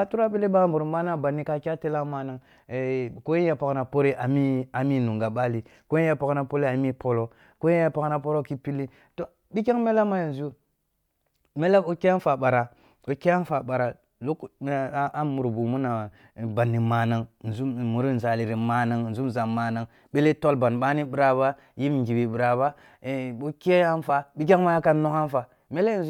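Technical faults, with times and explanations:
24.09 s, damaged data in a compressed stream: a very brief fault, only about 14 ms long, interrupts the speech. Part of the encoded data at this point is corrupt, so the decoder misreads or refuses that stretch and then resynchronises on the next valid frame. This differs from a plain dropout, which leaves clean silence, and from a single click: the decoder loses sync and searches for the next frame header.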